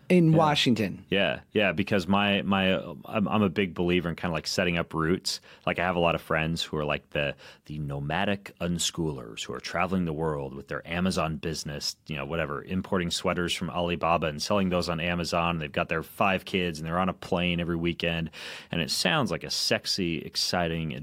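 No technical faults can be heard anywhere in the recording, and the speech signal stays steady and intact throughout.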